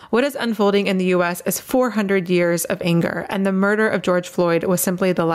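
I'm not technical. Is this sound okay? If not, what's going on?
No. The whole clip has gain pumping. Loud and soft parts end up closer in level, and the sound is squashed. The level keeps swinging a lot. The likely cause is a recording level set far too high, with an automatic limiter clamping it down.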